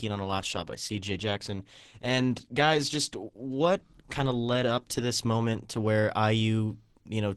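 An adaptive stream starting at a low bitrate affects the speech from 0.0 to 5.87 s. The player begins on a lean version of the stream, which sounds like Opus at around 16 kbit/s, until it has gauged the connection. During that stretch the treble is thin or artificial and codec artefacts are prominent. At 5.87 s the quality jumps to a fuller encoding, consistent with 64 kbit/s, with no gap. Nothing is present above 16.1 kHz.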